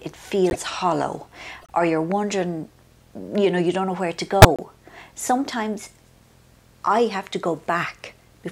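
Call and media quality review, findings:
Corrupt frame decoded at 0.46–0.56 s, 1.61–1.71 s and 4.41–4.61 s. The decoder played damaged codec frames, and flipped bits misread as gains and spectral codes put energy at the wrong frequencies. Heard as chirp or noise bursts. The first is loud, a few frames long. The second is faint, around -30 dBFS. The third is longest and near full scale. Spectrogram: misplaced blocks with frame-aligned edges. Waveform: bursts unrelated to the envelope.

Loud pop, 2.11–2.14 s, single, roughly 10 dB above signal. Likely an electrical transient from a connector, switch or static. Waveform: sharp spike. Spectrogram: thin full-height vertical line. The audio continues underneath.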